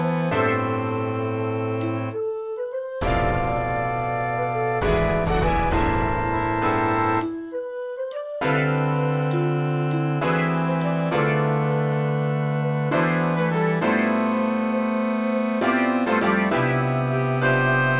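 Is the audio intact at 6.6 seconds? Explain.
Yes, at 6.6 s the audio runs through cleanly, with no dropout, click, distortion or other break in the signal.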